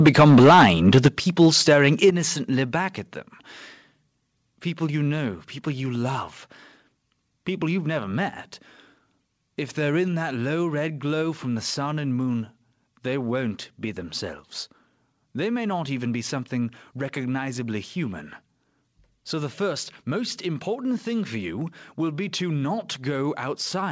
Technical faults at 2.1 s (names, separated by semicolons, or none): microphone volume stepped down